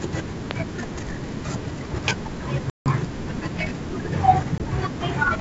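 An electrical switching spike at 0.51 s is a sharp snap laid over the speech, most likely an arc from a nearby switch or motor that the audio line picked up, sitting on top of the signal rather than replacing any of it.

Packet loss on an ADPCM call appears twice. From 2.70 to 2.89 s, about 160 ms of audio, likely several packets, drops to hard-edged silence. When the speech returns, the decoder's adaptive predictor and step size no longer match the sender's, so it comes back slightly distorted before settling over the next few tens of milliseconds. At 4.58 s a shorter gap of about 20 ms, roughly one packet, leaves a small hole with the same brief distortion as the decoder recovers. The G.722 wideband coding stays clear up to about 7 kHz, with at most a faint hiss in the upper band.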